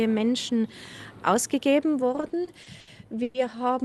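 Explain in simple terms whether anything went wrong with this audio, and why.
Repeated stalls (stutter) hit the audio between 2.15 and 3.36 s. Data crossing the call connection kept arriving late, so the receiver ran out of audio to play seven times. Each time it stretched the last bit of sound to fill the wait, the longest wait being 110 ms. Nothing is lost, but about a quarter of that stretch is filler, so the sound drags and hiccups. The Opus call link, which trims sound above 12 kHz, is working as expected.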